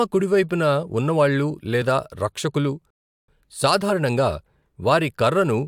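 A speech recording with one rebuffering stall: at 2.90 s the audio drops to silence until 3.28 s, then resumes exactly where it stopped. The player ran out of downloaded audio and waited for more, so nothing is lost, but about 0.38 s of dead air is inserted.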